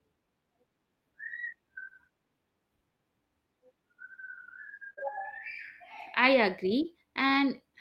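At 4.93 s a short concealed packet loss begins. Roughly 40 ms of the speech failed to reach the decoder in time, and the receiver covered about 35 ms of it by extending the preceding sound before crossfading back into the real signal near 4.99 s. It is heard as a brief smear or wobble. On a spectrogram the harmonics or noise band run on unnaturally flat, without normal movement, and the waveform shows the continued sound ending in a blend.

Overlapping it, from 4.97 to 5.07 s, comes a lost packet rebuilt from error correction. The roughly 60 ms rebuilt here fits about three separate lost packets. Each was replaced by the lower-bitrate backup copy carried in the next packet, so nothing drops out, but those stretches sound rougher and grainier. A spectrogram shows coarser, noisier detail across the affected frames, with less crisp harmonic structure. The waveform has no gap, only blurred texture compared with its surroundings.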